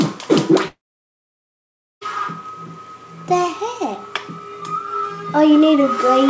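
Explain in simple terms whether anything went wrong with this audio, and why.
Yes, something went wrong. From 0.68 to 2.03 s the sound fades into a brief buzz, then goes silent. This long network dropout likely lost that part for good.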